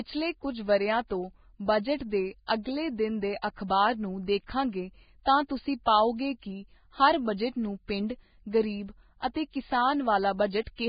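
Throughout, the speech stops dead at 4.9 kHz. The treble sounds hissy and grainy, and attacks blur. This is likely heavy Vorbis compression, its coarse quantisation swapping fine detail for noise.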